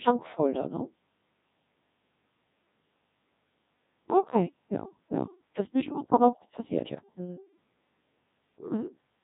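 From start to finish the speech has passed through the Codec 2 vocoder. Only pitch, voicing, energy and a coarse spectral envelope survived, and the decoder rebuilt the voice from sine waves, which fits a rate of about 1.6 kbit/s. The original waveform is gone. The result is heavily damaged, robotic and buzzy speech with a synthetic timbre, and nothing above 3.8 kHz, so it sounds dull and band-limited throughout.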